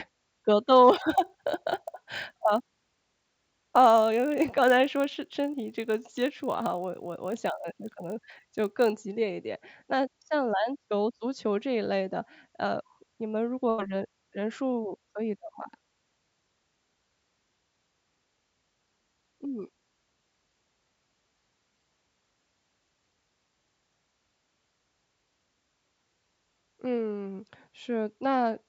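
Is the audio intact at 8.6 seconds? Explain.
No. At 8.6 seconds the speech carries a steady 50 Hz buzz, present from 0.9 to 8.9 s and only while there is signal. This is a resampler restarted on every block: each 20 ms block was converted separately, leaving a small error at every block edge.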